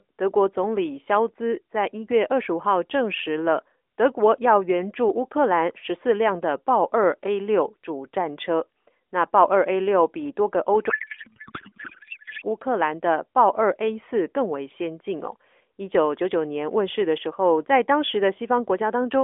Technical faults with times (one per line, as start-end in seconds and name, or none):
10.90-12.46 codec payload misread